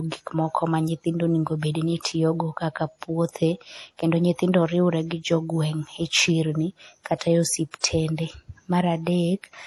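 From start to finish the speech sounds dull, with nothing above about 12.1 kHz and a mix of two different codec artefacts layered together. The cause is likely transcoding between lossy codecs. The sound points to a low-bitrate MP3 first, then HE-AAC, which spent its bits re-encoding the MP3's damage while adding its own. The chain's lowest cut-off remains.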